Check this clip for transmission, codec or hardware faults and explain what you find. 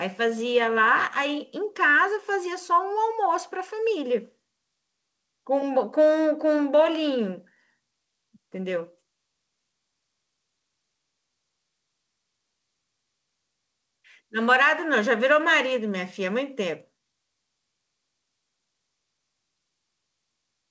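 Nothing here sounds wrong: the speech comes over what sounds like a G.722 wideband call link, with the top end stopping at about 8 kHz as that codec does, and nothing else stands out.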